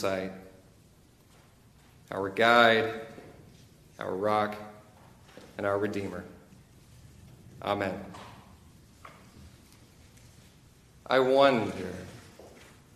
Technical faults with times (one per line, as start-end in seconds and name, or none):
none